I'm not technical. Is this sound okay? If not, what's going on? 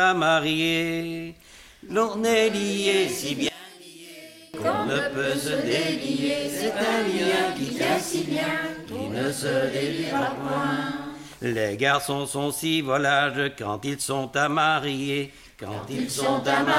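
No, not quite. From about 3.49 to 4.54 seconds the sound suddenly drops right down, then comes back to normal. The likely cause is one channel inverted: one side of the stereo pair has been flipped upside down, so when the two sides get mixed together they mostly cancel each other out. The faint, weak bit left behind is just whatever differed between left and right.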